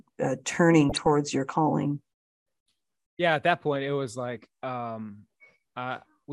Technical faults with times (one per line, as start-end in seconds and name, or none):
0.89-1.07 DAB burbling